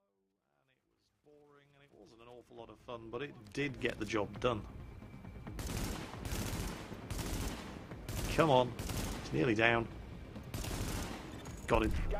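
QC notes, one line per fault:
No faults heard anywhere in this audio.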